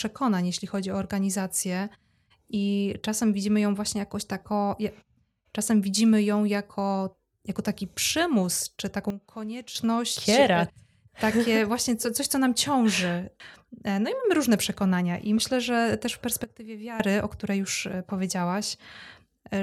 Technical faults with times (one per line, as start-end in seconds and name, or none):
9.10-9.75 sudden gain jump
16.44-17.00 sudden gain jump